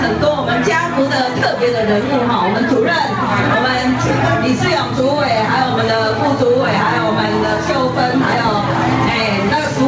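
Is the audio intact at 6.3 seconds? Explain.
No. Gain pumping runs through the whole clip, including 6.3 s: the level is pulled down on each loud sound and the gain swings by around 10 dB, squashing the dynamics. The likely cause is excessive input gain driving a fast limiter.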